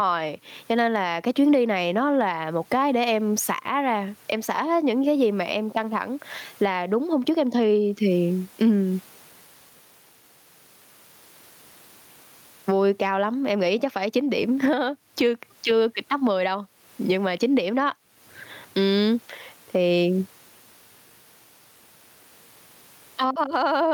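The gain swings roughly 20 dB under loud speech throughout, squashing loud and soft parts closer in level: gain pumping, likely over-high gain hitting a fast limiter.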